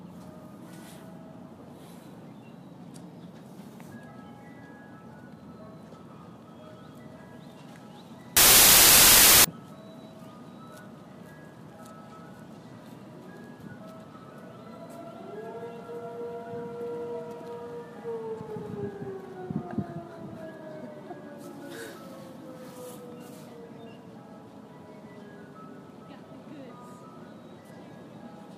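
From 8.37 to 9.44 s, the samples are built from the wrong bytes. Each sample's bytes were joined in the wrong order or alignment. The rapidly changing low bits became the large part of every value. The result is a burst of loud, harsh broadband noise lasting about a second.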